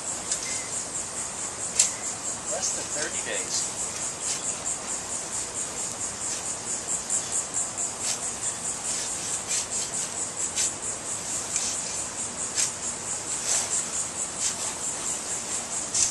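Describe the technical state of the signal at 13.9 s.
At 13.92 s there is an overlap between stream segments. The audio is cut into 2-second segments, and two of them carry time stamps that overlap, so the player drops the stretch it takes to be doubled. The sound that was actually there is lost, and the waveform jumps abruptly from one level to another. It is heard as a brief click or tiny skip. On a waveform it shows as a sudden discontinuity. On a spectrogram it appears as a thin vertical broadband line.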